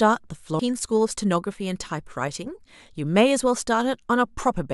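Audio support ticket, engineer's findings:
Damaged data in a compressed stream at 0.58 s: corrupt frame bytes, decoder loses sync and hunts for the next header. Short glitch.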